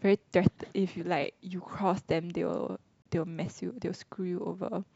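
At 3.02 s the speech drops out for about 34 ms, a gap between stream segments: two segment timestamps failed to meet, and the player filled the hole with silence. It sounds like a brief hard cut; the waveform shows a flat line and the spectrogram a clean vertical blank.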